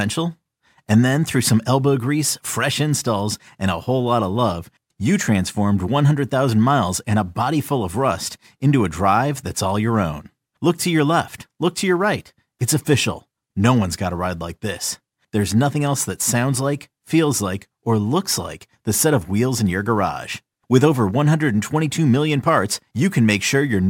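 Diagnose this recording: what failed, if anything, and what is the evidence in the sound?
Sample clock jitter in the converter runs throughout the speech: a hiss roughly 30 dB below the signal that swells on loud, bright sounds and vanishes in pauses, unlike a steady noise floor.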